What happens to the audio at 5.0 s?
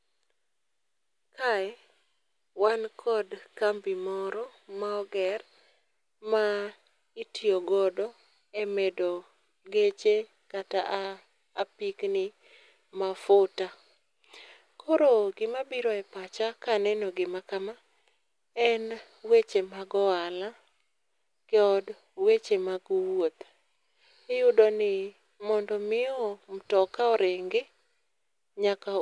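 Nothing goes wrong at 5.0 s; the speech is intact there, with no dropout, click, distortion or other fault.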